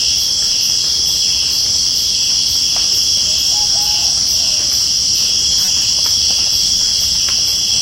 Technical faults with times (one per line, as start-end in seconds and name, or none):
5.65-5.68 corrupt frame decoded